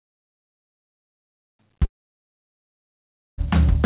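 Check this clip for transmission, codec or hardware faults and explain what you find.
One fault: the music drops out for about a second and a half. The whole clip also stops at 4 kHz, which fits a narrowband G.711 call path.

From 1.85 to 3.41 s the music cuts out, likely a long network dropout. When packets stopped arriving, the receiver stretched the last sound into a brief fading buzz or hiss, then gave only near-silence. The waveform flattens and the spectrogram goes blank until the music resumes, with that passage lost.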